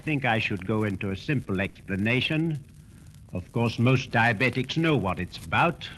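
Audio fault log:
1.69 to 1.78 s, burst of packet loss: about 60 ms of audio dropped, and the receiver stretched the last sound and faded it, so you get a brief held tail before playback jumps ahead.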